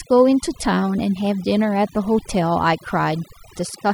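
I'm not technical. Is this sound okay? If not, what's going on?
No. Overdone noise removal was applied throughout: the cleanup shut off too much, leaving near-silent gaps with twinkling specks.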